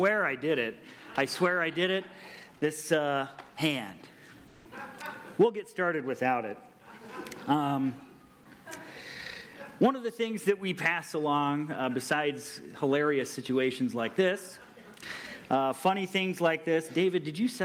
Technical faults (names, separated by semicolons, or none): comfort noise in place of the background